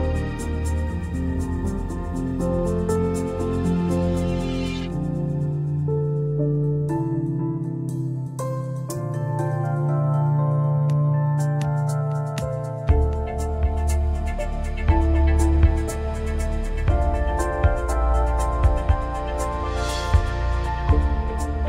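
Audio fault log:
No faults detected on listening.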